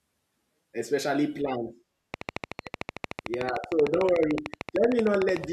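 Right after "especially plans", at 2.14 s, a train of clicks kicks in and keeps going until 5.45 s, near the end. It's a steady ticking at about 13.3 clicks per second, evenly spaced, around fifty in all, each pop poking well above the speech, something like 15 dB louder, and clearly audible in the gaps too. That regular, same-shaped pulsing most likely comes from interference from nearby gear or a faulty connection or power supply.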